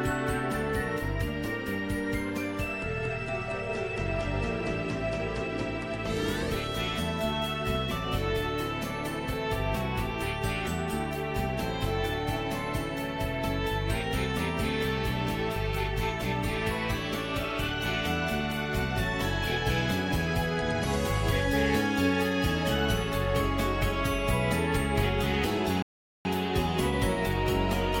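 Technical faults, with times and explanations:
25.82–26.25 s, rebuffering stall: the sound drops to silence for 0.43 s, then resumes at exactly the point where it broke off, with nothing skipped. The player used up its downloaded audio and waited for more data, so the pause adds time without removing any.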